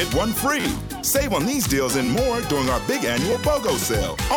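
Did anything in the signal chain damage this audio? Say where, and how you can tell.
Yes. A repeated buffer at the driver or buffer stage. Brief buzzy stutters occur at 0.60–0.64 s, 2.06–2.08 s and 3.32 s. An 11.6 ms slice plays again with hard joins, which fits a 512-sample buffer. Fresh data arrived late, so the device replayed its last block.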